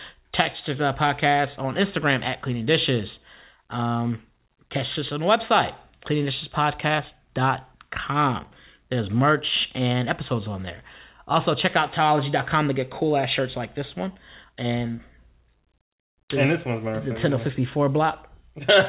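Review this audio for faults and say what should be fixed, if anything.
No faults turn up in this audio, so nothing needs to be fixed.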